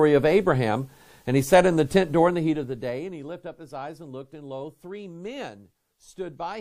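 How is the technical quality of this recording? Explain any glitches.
One glitch stands out. From 2.13 to 3.33 s there is zipper noise. The level drops by about 15 dB in unsmoothed 1 dB steps, roughly ten per second. Each step clicks, so a ticking rides on the sound. The waveform shows a staircase envelope, and the spectrogram shows faint vertical lines at each step.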